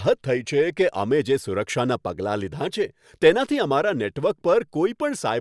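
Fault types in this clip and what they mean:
No technical faults can be heard in this speech recording: the signal stays continuous and steady, with no breaks, level jumps or added disturbances.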